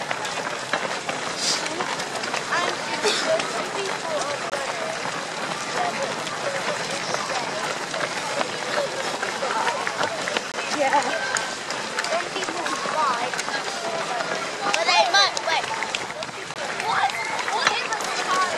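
At 4.50–4.52, 10.52–10.54 and 16.54–16.56 s there's a gap between chunks: 20 ms hard-edged silent holes, six seconds apart, where chunk joins got padded with silence.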